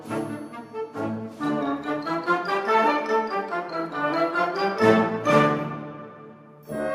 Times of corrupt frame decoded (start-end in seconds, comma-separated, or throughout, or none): none